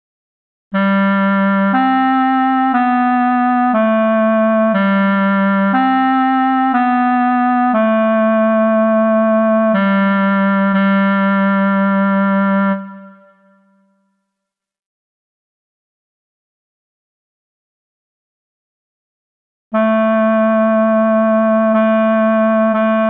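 No technical faults can be heard anywhere in this audio. Nothing in the signal calls for comment.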